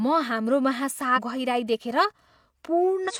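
At 1.13 s the speech is briefly disrupted until 1.19 s. The same thing happens again from 3.05 s to 3.12 s. Both are signs of damaged data in the compressed stream. Some bytes in those frames are wrong, so the decoder cannot read them properly. It loses sync and hunts for the next valid frame header. Each time this gives a short disruption of about 60 to 70 ms.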